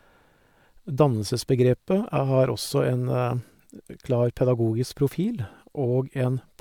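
Nothing here trips any alarm: no dropouts, clicks, distortion or glitches turn up anywhere in the recording.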